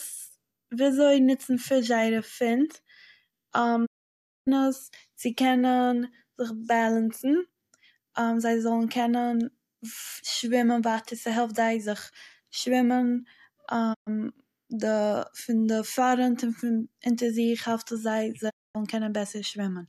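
Digital broadcast dropouts mute the speech at 3.85–4.49 s (just before "עס צו"), 13.93–14.09 s and 18.49–18.77 s (after "זיך העלפט עס זיי"). Each time the receiver lost the frames, faded to silence within about 20 ms, and the speech sent meanwhile is gone.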